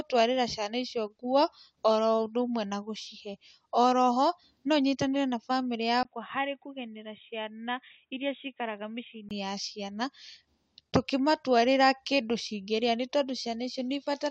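At 6.03 s speech turns dull and quieter, losing everything above 3.8 kHz, until 9.31 s. The input has likely switched to a poorer device.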